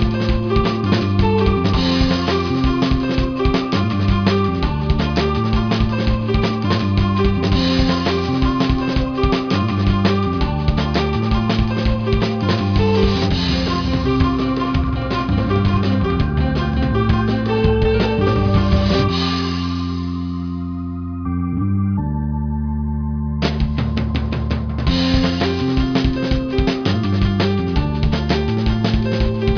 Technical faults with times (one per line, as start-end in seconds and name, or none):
0.00-29.57 aliasing